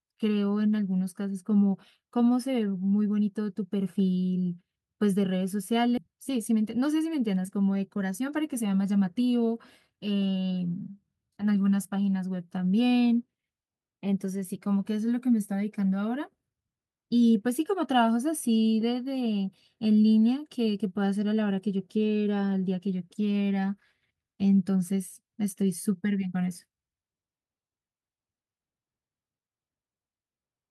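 At 5.97 to 5.99 s the speech has a skip ahead. About a second of audio was thrown away while later audio was already queued. Playback jumps straight across the missing stretch. Nothing fills the join, so the two sides meet almost directly. The listener hears an abrupt cut, with part of the speech simply gone.

Right after this comes a jitter buffer speed-up, from 6.09 to 7.45 s. The buffer was holding too much audio. To cut the extra delay, the receiver removed many short pieces, each one or a few pitch periods long. Together they total roughly 150 ms. The speech runs about 9 percent fast at unchanged pitch, and it sounds rushed. A second speed-up follows from 7.96 to 9.50 s at about 7 percent. It trims roughly a tenth of a second, and the hurried delivery continues.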